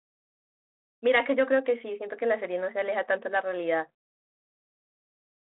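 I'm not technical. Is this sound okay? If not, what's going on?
Yes, this telephone-quality speech recording has no technical faults; it has the narrower, phone-like sound expected from a standard digital phone connection.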